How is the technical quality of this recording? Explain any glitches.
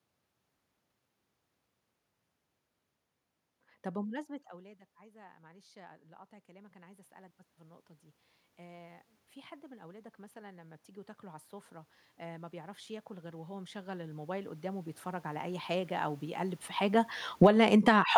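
The recording suffers from automatic gain control that keeps chasing the level of the speech.

The first automatic gain rise runs from 3.92 to 7.91 s. Around 4 s the talker moves away, and the input drops by about 23 dB. The gain control then lifts its gain by about 7 dB over four seconds. The voice and the room noise swell together. A second rise, of about 5 dB, creeps in slowly from 8.56 to 17.98 s.

The automatic gain falling starts at 17.27 s and runs to 18.13 s. The talker moves again around 16.5 s. The control cuts its gain by about 15 dB in under a second. The speech sinks sharply, and the background noise sinks with it.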